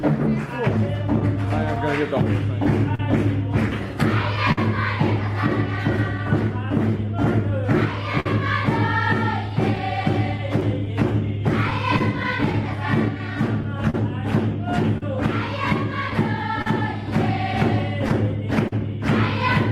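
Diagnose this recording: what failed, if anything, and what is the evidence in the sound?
The sender's clock runs slow against the receiver's, by roughly 4 percent. This clock drift between sender and receiver sits at the network and jitter-buffer stage. A slow sender means the buffer keeps draining, so the receiver must stretch material. The evidence is a steady lean in one direction across the whole clip rather than isolated events. That sets it apart from a one-off network burst, which would cluster in one spot.

Repeated timing corrections run from 0.01 s to 18.24 s, with playback effectively at 99 percent speed. The receiver repeatedly repeats small slices to keep pace with the lagging sender, adding roughly 150 ms in total. Each edit is tiny, heard, if at all, as a faint hiccup or slightly unsteady tempo at uneven spacing. Because every correction pushes the same way, this is buffer adaptation, not random packet loss.

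Scattered short gaps appear between 1.2 s and 18.73 s, around thirty of them, the longest about 50 ms. Together they cover roughly half a second, a few percent of that span. Each hole is patched by extending the preceding sound, giving brief smears or ticks rather than silent dropouts. Their scattered, independent placement marks them as individual lost or late packets concealed at the receiver, distinct from the steady, one-directional drift corrections.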